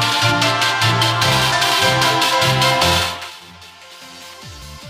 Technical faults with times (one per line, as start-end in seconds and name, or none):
none